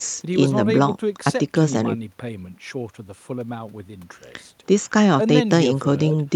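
No technical faults detected.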